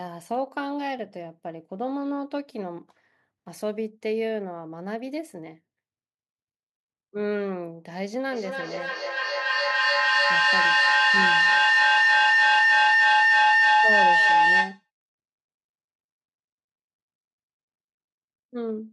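At 8.32 s a feedback howl starts building: sound is looping from microphone to loudspeaker and back, gaining on each pass, narrowing to a tone around 2 kHz that pulses roughly every third of a second. It peaks about 9 dB above the speech before cutting off at 14.9 s.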